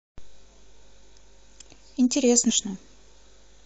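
At 2.49 to 2.51 s there's damaged data in the compressed stream: corrupt bytes throw the decoder out of sync, giving a brief chirp, squawk, click or short hole in the speech.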